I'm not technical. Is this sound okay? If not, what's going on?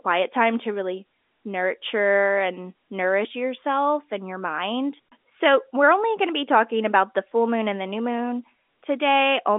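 Yes, this speech is in good technical shape, with nothing going wrong in the recording itself; it has the slightly narrow, thin quality of an ordinary landline call, because the telephone coding keeps only the middle range of the sound.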